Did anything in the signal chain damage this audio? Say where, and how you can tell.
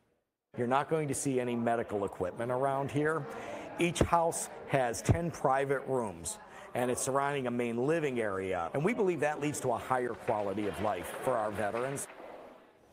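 No, nothing in the signal chain audibly damaged this audio, and the signal holds steady throughout without any stage leaving a mark on it.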